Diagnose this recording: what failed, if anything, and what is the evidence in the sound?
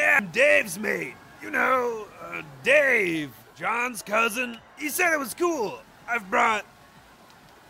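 Pickup on the analogue wiring, likely from a nearby switch arcing, causes an electrical switching spike at 4.54 s: a quiet snap.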